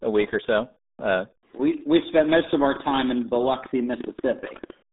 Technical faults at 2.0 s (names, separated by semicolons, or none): RealAudio 14.4 codec